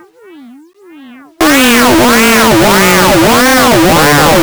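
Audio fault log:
1.41–4.42 s signed and unsigned mixed up: abrupt, harsh, very loud distortion, quiet parts as loud as the rest; likely flipped top bit, waveform jumping across its whole range at each zero crossing, spectrogram smeared broadband.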